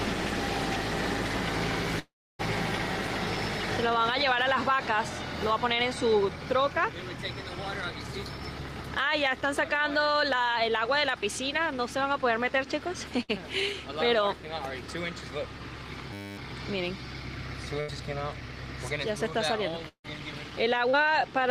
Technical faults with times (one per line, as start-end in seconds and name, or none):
1.99-2.41 long network dropout
13.23-13.30 burst of packet loss
16.13-16.38 system hang loop
17.80-17.90 burst of packet loss
19.88-20.06 long network dropout
20.90-21.03 short concealed packet loss